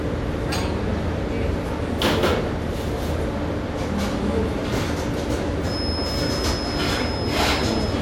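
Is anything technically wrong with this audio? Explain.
Yes, there's a feedback whistle from 5.61 s through to the end: a thin, steady tone at 5.1 kHz sitting around 10 dB under the sound, swelling and fading slowly. It's likely a speaker-to-mic loop hovering right at the edge of feedback without running away.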